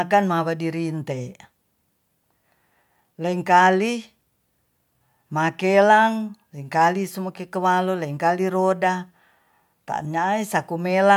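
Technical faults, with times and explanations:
No technical faults heard.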